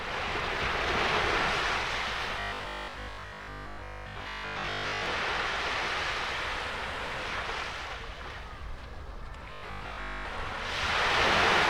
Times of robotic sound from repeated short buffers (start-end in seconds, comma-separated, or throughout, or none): 2.40-5.06, 9.53-10.27